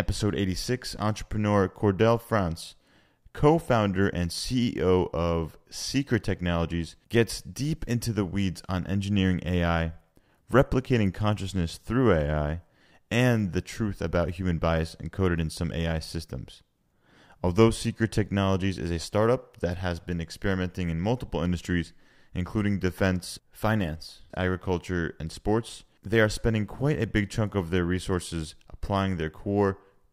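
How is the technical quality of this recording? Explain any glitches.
No audible glitches or faults.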